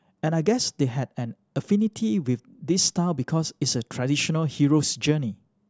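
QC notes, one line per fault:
No faults found in the speech on this pass; nothing to log.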